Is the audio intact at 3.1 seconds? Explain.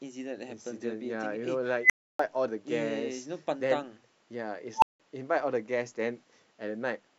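Yes, at 3.1 seconds the speech plays through intact, with no dropout, click, distortion or other fault to be heard at that point.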